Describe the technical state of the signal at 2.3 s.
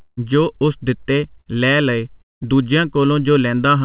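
At 2.3 s the signal sits inside a gap running from 2.22 to 2.47 s, just after "ਉਸ ਦਿਤੇ ਲੈ ਲਏ". The last sound is stretched into a fading buzz, then near-silence, and speech resumes with about 200 ms missing, likely a long network dropout concealed by the receiver. A spectrogram shows smeared, flat horizontal bands dying into a blank stretch. The waveform shows a decaying repetitive envelope, then a near-flat line.

The channel delay (comb filtering) heard throughout is also present here. One channel lags by well under a millisecond before the mono sum, so cancellations fall near 700 Hz and at evenly spaced frequencies above, giving a hollow, phasey tone. A spectrogram shows fixed, regularly spaced dark notch lines below the 4 kHz ceiling of the call path.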